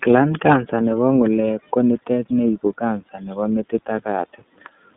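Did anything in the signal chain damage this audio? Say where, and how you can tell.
Yes. Throughout the speech the sound is thin and slightly rough and synthetic, with nothing above 3.8 kHz and a band of about 200 Hz to 3.7 kHz. That is the iLBC codec at the codec stage, coding each 30 ms frame's excitation independently, which fits its 13.33 kbps mode.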